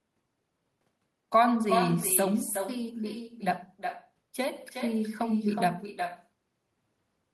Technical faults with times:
0.00-7.34 echo with no canceller

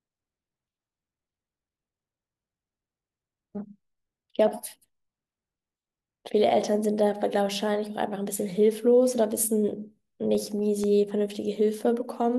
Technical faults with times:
10.35-10.84 CD scratch ticks

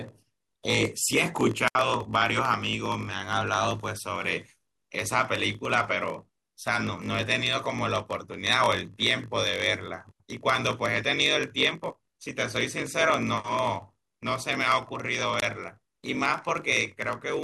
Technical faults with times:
0.00-17.44 block size mismatch (padded)
1.66-1.76 wireless microphone squelch dropout
15.38-15.42 wireless microphone squelch dropout

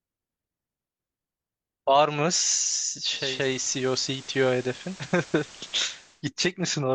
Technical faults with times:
3.03-6.26 digital radio blending to analogue

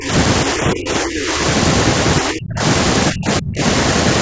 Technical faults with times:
0.00-0.10 speech suppressed in double talk
0.45-1.42 speech suppressed in double talk
2.21-2.61 speech suppressed in double talk
3.11-3.61 speech suppressed in double talk

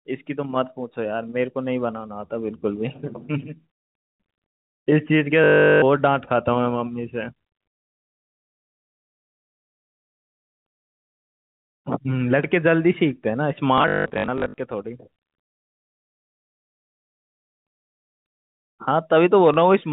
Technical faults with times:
5.44-5.82 packet loss with last packet repeated
13.78-14.58 packet loss with last packet repeated
19.54 packet loss with last packet repeated

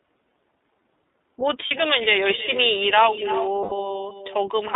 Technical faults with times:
0.00-4.75 echo with no canceller
0.00-4.75 iLBC codec
1.67-1.72 lost iLBC frames
3.63-3.73 lost iLBC frames

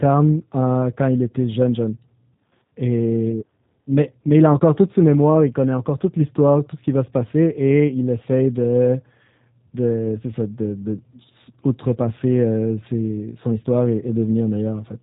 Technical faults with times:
0.00-15.02 G.729 codec

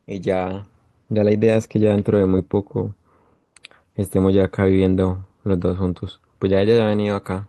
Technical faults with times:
0.00-7.49 clock drift between sender and receiver
0.01-7.37 repeated timing corrections

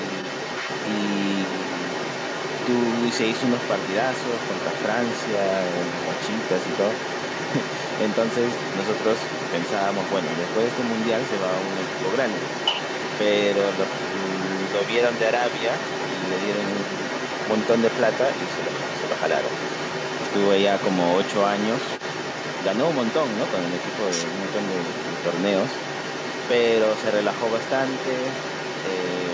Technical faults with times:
0.00-29.34 other side's voice leaking through

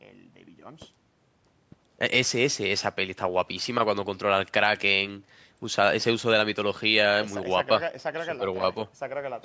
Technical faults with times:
none

